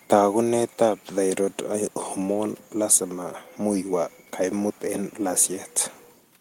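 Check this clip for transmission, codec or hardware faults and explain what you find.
The speech signal arrives intact, with only a low room noise sitting about 41 dB beneath the voice as part of the original recording.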